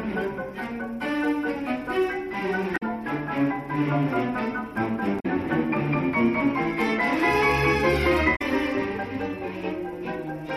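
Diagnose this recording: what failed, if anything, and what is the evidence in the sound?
The failure is at the codec stage: damaged data in a compressed stream. There are short garbled bursts at 2.73–2.83 s, 5.16–5.26 s and 8.32–8.42 s, each about 95 ms. Corrupted bytes make the decoder misread those frames and lose sync until it locks onto the next header.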